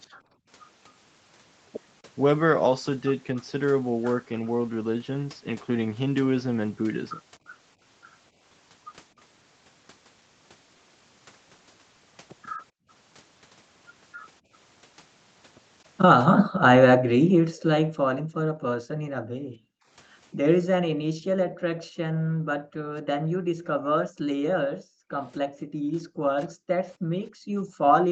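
From 0.11 to 0.47 s the room background drops by about 26 dB, and from 12.71 to 12.88 s by about 40 dB. This is background gated by the echo canceller, which pulls the microphone down while the far end plays. From 16.3 s to the end the floor stays suppressed by up to about 40 dB. A spectrogram shows the noise floor blanking into dark gaps. The waveform shows the floor flattening.

At 17.54–17.68 s a faint delayed copy of the speech, lagging 276 ms and sitting about 20 dB below it, is likely an echo leak. Here residual loudspeaker pickup slipped past the canceller. It appears as a weak, offset repeat of the speech striations.

Brief dips of around 40 dB at 22.1–22.15 s and around 25 dB at 25.88–25.95 s are speech suppressed in double talk, likely because the canceller mistook overlapping talk for echo. They show as notches cut through the speech energy, under an 8 kHz ceiling.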